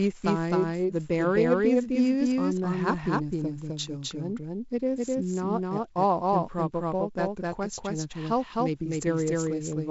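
From start to finish the speech is shadowed by a doubled audio track: a second full-band copy trails the first by roughly a third of a second, at about the same level, so every syllable lands twice. The copy has no decay or room colour, which rules out a real echo. The likely cause is the same signal being picked up again through a slower path, or an edit leaving two copies out of step. It sits on top of the narrow wideband telephone sound, which stops at about 7.7 kHz.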